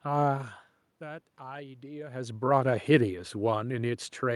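From 0.99 s to 2.46 s, automatic gain rising: after the input fell by about 16 dB, the control slowly added about 3 dB. Unlike the talker shifting near half a second and two seconds, the room noise swells along with the speech.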